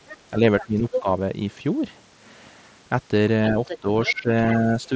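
Speech, carried over a wideband Bluetooth headset link that stops around 8 kHz, with a second voice bleeding in: a faint scrap at 0.07–0.17 s about 20 dB under the talker, a stretch at 0.6–1.01 s roughly as loud as the talker, and another at 3.68–4.14 s about 10 dB down. This is the other side's voice leaking through, likely loudspeaker sound that the echo canceller failed to remove from the microphone. The talker's own voice also dips and breaks up while that second voice is present, from 0.4 to 1.07 s by up to about 10 dB and from 3.52 to 4.29 s by up to about 15 dB, with roughly a third of a second affected each time. This is speech suppressed in double talk, likely the canceller turning everything down when it could not separate the talker from the echo.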